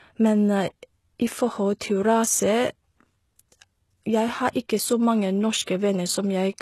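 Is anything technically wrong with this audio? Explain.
Yes, there are two faults. Throughout the speech, the treble sounds synthetic: s sounds come out gritty and metallic, with nothing above 12.3 kHz. The likely cause is HE-AAC compression, where spectral band replication rebuilds the upper bands from copied lower ones. The plainly audible damage points to a low bitrate of around 16 kbps.

Pre-echo appears from 5.62 to 5.67 s, just after "har ikke så mange". A short hiss leads into the next attack, which sounds smeared. The codec spread quantisation noise across its transform block, so the noise meant for the onset leaked into the quiet 47 ms before it.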